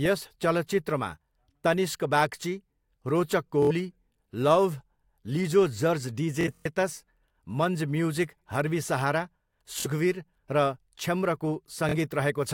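Bluetooth stutter hits at 3.62, 6.41, 9.80 and 11.89 s. Lost packets make the receiver loop its last slice, a buzzing stutter before the speech skips ahead, longest at 6.41 s.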